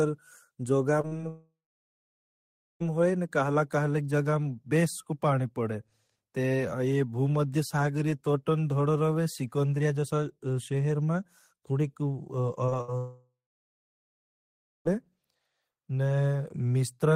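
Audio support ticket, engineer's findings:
Brief smears at 1.01–1.05 s, 1.07–1.13 s, 1.17–1.21 s and 12.66–12.73 s. Short concealed packet loss: 20–40 ms gaps that the receiver patched by extending the preceding sound, then crossfaded back.

Held sound fading out at 12.81–12.90 s. Burst of packet loss: about 60 ms of consecutive packets gone, concealment stretching the last sound while attenuating it, with the audio resuming past the hole.

Fading concealment collapsing to silence at 1.29–2.82 s, with audio returning on "होई न कहला कहले", and again at 12.98–14.87 s. Long network dropout, likely a transport stall. About 1.5 s and 1.9 s never arrived. Concealment faded within a few tenths of a second, leaving roughly 1.2 s and 1.5 s of silence.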